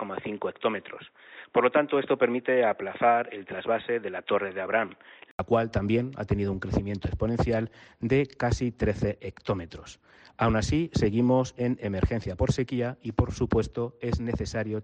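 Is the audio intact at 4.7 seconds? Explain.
No, at 4.7 s you're still inside the dull stretch from 0.0 to 5.39 s. Nothing comes through above 3.8 kHz and there's a faint new background noise, likely an input switched to a poorer device, before an 80 ms gap restores the full band.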